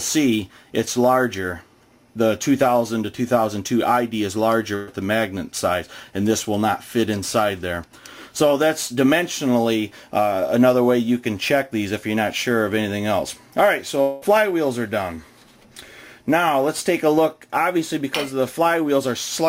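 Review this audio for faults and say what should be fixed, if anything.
A burst of packet loss occurs from 4.75 to 4.89 s. For about 120 ms the receiver has nothing new to play, so it keeps extending the last sound it had, turning it into a held buzz or hiss that fades as the gap continues. When audio resumes, roughly 120 ms of material has been skipped, so the sound jumps forward. A larger jitter buffer combined with forward error correction or packet redundancy would prevent this kind of short burst from reaching the listener.

From 14.01 to 14.24 s, the last sound is stretched and fades for about 200 ms, never dropping to full silence, and then the audio picks up again with about 200 ms missing. The likely cause is a long network dropout, during which no packets arrived and the receiver concealed the gap with a decaying continuation of what it last heard. Fixing it means stabilising the network path, for example by reducing congestion or avoiding handovers and weak wireless links.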